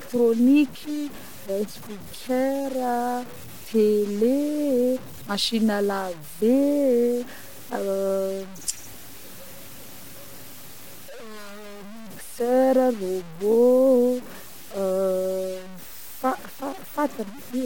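Speech, with low bit depth without dither from start to end. The grainy distortion follows the voice and roughens quiet passages. Soft tails sputter or drop out. The error sits only about 20 dB below the speech. This points to likely truncation to around 6 bits.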